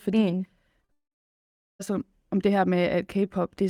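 A speech recording with two kinds of network fault close together. The first is short concealed packet loss, twice in a row. One gap runs from 0.81 to 0.85 s, and the next from 0.85 to 0.90 s. About 20 ms and then 40 ms of audio never arrived. The receiver bridged each hole by extending the preceding sound for roughly 12 ms and 38 ms. The result is a quick smear or wobble. Then, from 0.92 to 1.81 s, the audio drops out for almost a second. A brief synthetic continuation fades away. After that there is silence for about 790 ms. About 880 ms of real signal is missing, and the speech resumes past the lost part. The likely cause is a long network dropout, with the receiver's concealment giving up and muting.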